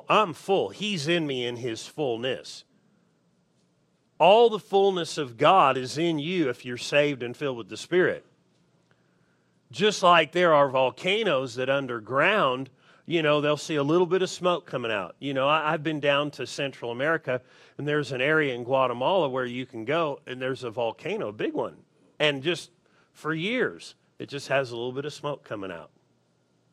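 No audible technical faults occur anywhere in the recording; the signal holds steady and unbroken throughout.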